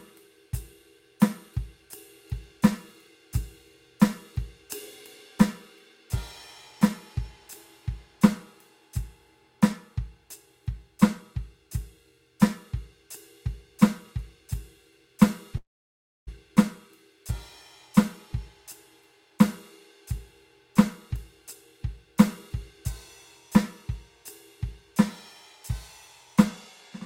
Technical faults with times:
15.57-16.29 long network dropout

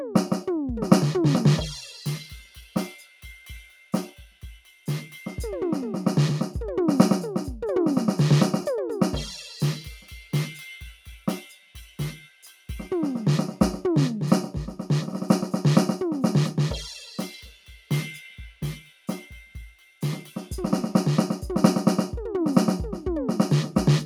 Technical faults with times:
0.00-24.05 noise suppressor applied to music or sounds
2.41-4.87 sound cut by the noise suppressor
10.00-10.33 sound cut by the noise suppressor
11.43-12.69 sound cut by the noise suppressor
17.51-17.90 sound cut by the noise suppressor
18.52-19.08 sound cut by the noise suppressor
19.45-20.02 sound cut by the noise suppressor

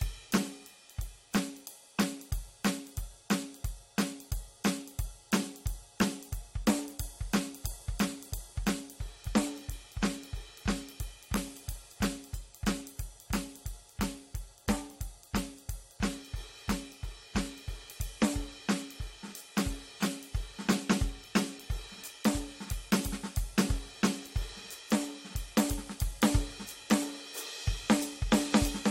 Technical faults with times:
none

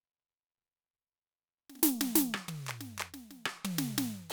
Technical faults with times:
none

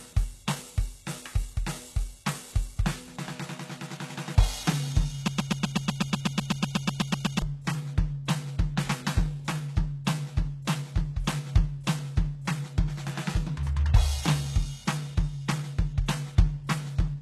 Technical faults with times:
0.00-17.22 HE-AAC compression
5.28-7.42 broken-record loop

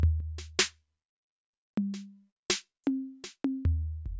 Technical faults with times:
none

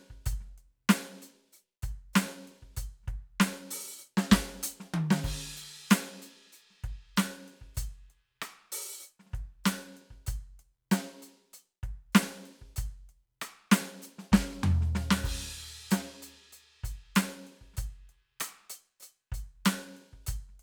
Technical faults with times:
none

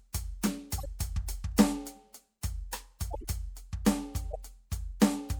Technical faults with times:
0.78-0.86 corrupt frame decoded
3.11-3.25 corrupt frame decoded
4.31-4.36 corrupt frame decoded

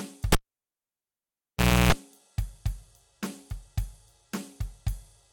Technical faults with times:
0.32-1.92 cable pulled and plugged in

